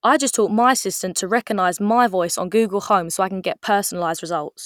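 No technical faults detected.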